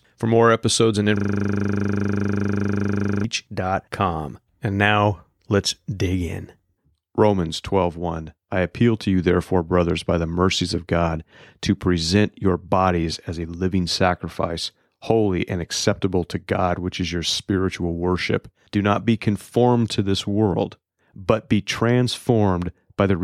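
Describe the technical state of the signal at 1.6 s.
At 1.6 s you're inside a system hang loop from 1.17 to 3.24 s, right after "more episodes and": a frozen system replays one 40 ms slice, giving a 25 Hz buzz.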